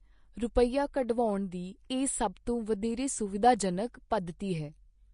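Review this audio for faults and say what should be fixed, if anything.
Vorbis compression, throughout the clip: the speech sounds plainly hissy and grainy, with roughened tones and smeared consonant attacks, likely because the encoder coded the treble too coarsely, which fits a bitrate around 34 kbps. To prevent it, encode at a higher Vorbis quality setting.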